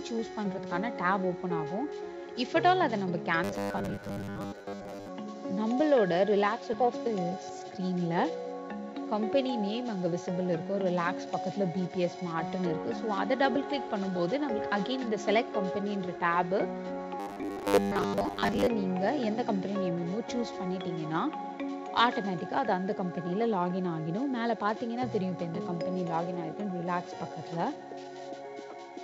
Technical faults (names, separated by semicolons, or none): robotic sound from repeated short buffers; skip ahead; jitter buffer speed-up